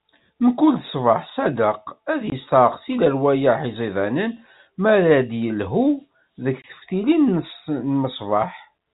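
At 2.30 to 2.32 s and again at 6.62 to 6.64 s, the speech drops out for a brief 20 ms gap with hard edges. These are packet loss filled with silence. Each gap fits a single lost 20 ms packet, and the receiver played silence in its place, so the waveform jumps abruptly to silence and back. Around the holes, the telephone-band G.711 sound keeps its usual cut-off near 4 kHz.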